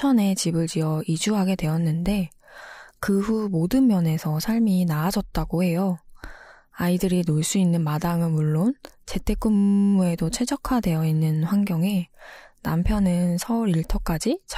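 Speech clip with a system hang loop from 9.56 to 9.93 s. A 10 ms piece repeats exactly, giving a steady 100 Hz buzz. The waveform shows identical 10 ms cycles, and the spectrogram shows evenly spaced harmonics at multiples of 100 Hz. Little or no audio appears lost.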